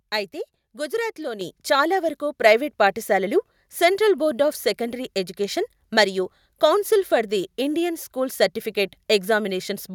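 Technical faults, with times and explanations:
1.41 s: microphone volume stepped up, the software raised input gain about 7 dB at once, lifting speech and background together; the waveform envelope jumps abruptly.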